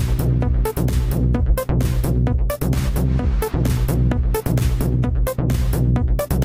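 No technical faults are audible.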